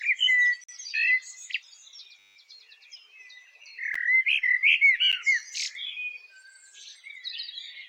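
At 0.64 to 0.69 s a block of digital silence cuts a 46 ms hole, likely a 2048-sample buffer left unfilled. It shows as a flat line on the waveform with hard edges at both ends.

From 2.19 to 2.36 s a system hang loop repeats one 10 ms fragment 17 times, giving a 100 Hz buzz. The spectrogram shows evenly spaced harmonic stripes, and the waveform shows an identical repeating shape.

Brief 12 ms blocks of digital silence at 3.94 s and 5.12 s fit 512-sample blocks. Each is heard as a tick and appears as a thin vertical gap.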